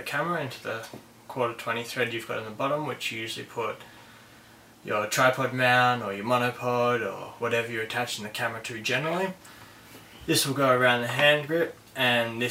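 No technical faults can be heard anywhere in the clip.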